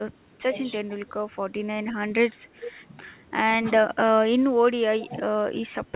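The speech dips sharply at 0.46 to 0.56 s and 0.84 to 1.07 s, by about 20 dB, then more patchily across 2.19 to 2.77 s, about 15 dB down. That's most likely speech suppressed in double talk: the echo canceller couldn't tell this talker from the far side's echo and pulled both down.

Inside that stretch, at 2.61 to 2.71 s, there's a faint echo leak, likely from a loudspeaker endpoint whose canceller let some pickup through. It's a copy of the voice trailing by about 0.42 s, around 15 dB under the speech.

There's a tiny dip of about 5 dB at 3.62 to 3.66 s. Then at 5.01 to 5.08 s the echo leaks again, about 0.42 s late and around 20 dB down, right before another suppression at 5.07 to 5.45 s, about 15 dB deep. All of it sits in the G.711 call band, with nothing above 4 kHz.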